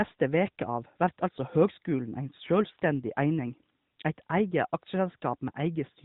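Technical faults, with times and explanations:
Nothing here stands out as a technical fault, so there's nothing to flag at any point in the clip.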